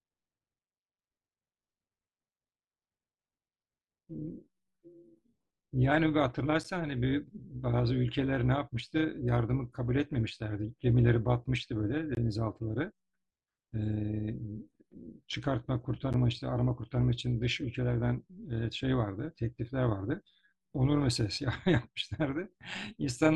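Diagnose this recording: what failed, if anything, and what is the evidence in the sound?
Overlap-add ripple from the frame processing stage. Throughout, level swings about 6 dB at around 200 Hz, giving a metallic buzz with extra tones around each note because the reassembled frames' windows don't sum flat.

Blocks of digital silence, from the driver or buffer stage. Hard cuts with no fade occur at 6.64 s, 12.15–12.17 s and 16.13 s. The 10.7 ms holes fit an unfilled 512-sample buffer, and the 21 ms hole fits two.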